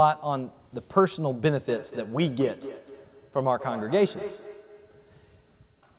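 From 1.68 s to the end of the clip, a second device in the same room is playing back this microphone's audio, and the microphone picks it up again. This is feedback echo between two devices: neither echo canceller removes sound it did not play itself. The speech returns at a steady interval of about a fifth of a second, reaching about 18 dB below the direct speech. Each return sounds thinner and more ringing, heard through the narrowband 4 kHz ceiling of what is likely a G.711 A-law codec.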